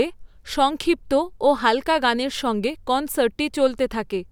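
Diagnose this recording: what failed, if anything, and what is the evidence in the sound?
Nothing in the signal chain seems to have failed here; the speech comes through without any glitch, dropout or distortion worth pointing to.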